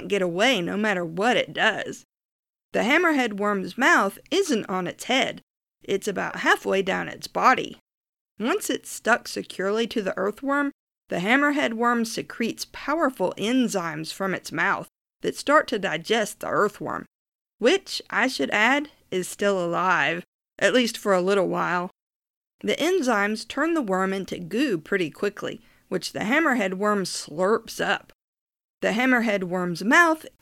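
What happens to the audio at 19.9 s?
Nothing goes wrong at 19.9 s; the speech runs through that moment intact, with no dropout, click, glitch or other audible fault.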